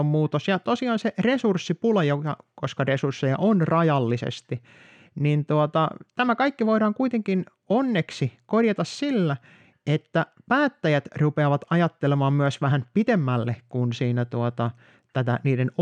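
Speech, with no audible faults.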